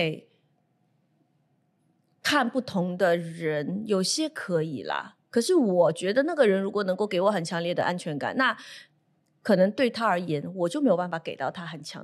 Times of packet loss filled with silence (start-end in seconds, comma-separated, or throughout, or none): none